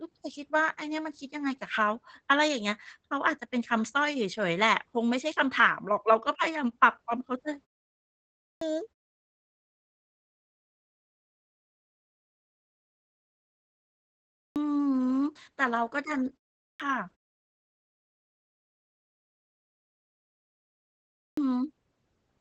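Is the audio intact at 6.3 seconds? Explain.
No. At 6.3 seconds, as throughout the clip, the speech sounds muffled and hoarse, with a faint robotic edge, and nothing is heard above about 8.6 kHz. This is Opus voice compression at a low rate, consistent with about 12 kbps in SILK wideband mode. The linear-prediction coder caps the band near 8 kHz and quantises the excitation coarsely, so upper detail is lost and the voice texture roughens audibly.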